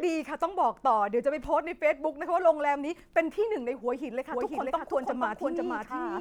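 At 4.32 s a doubled audio track cuts in abruptly and runs to the end: a second full-band copy of the speech, at roughly equal level, trails the original by about half a second, with no decay or room colour. It was likely captured again through a slower path. On a spectrogram every harmonic pattern reappears shifted right by that interval, and the waveform shows overlapping, repeated envelopes.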